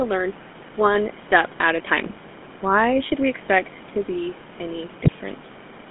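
Throughout the clip the speech passes through the GSM full-rate codec: the vocal tract is modelled and driven by a coarse, thinned-out pulse excitation, which fits 13 kbps GSM full rate. The line band runs from 150 Hz to 3.5 kHz, leaving the voice plainly buzzy and gravelly, with room noise about 22 dB below the speech.

From 5.04 to 5.13 s, GSM bit errors corrupt the decoder's filter, pitch and gain values, which fits about four damaged frames at a bit error rate near 3.6 percent. The spectrum bends and the level jumps, so the voice breaks into squawks, pops and gargling.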